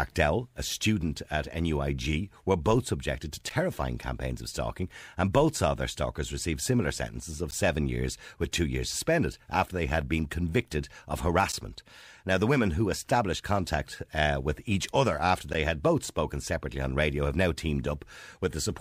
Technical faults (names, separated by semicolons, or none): gap between chunks